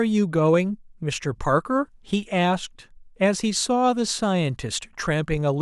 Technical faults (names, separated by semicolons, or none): none